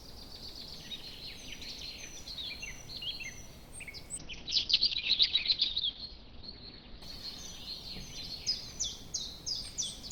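From 4.18 s to 9.81 s the audio shows a call bitrate drop. It turns rough and muffled, worst for about 1.6 s, which fits the encoder falling from roughly 64 kbps to about 7 kbps. On a spectrogram, content above 6 kHz vanishes and the top edge drops from near 20 kHz to near 6 kHz.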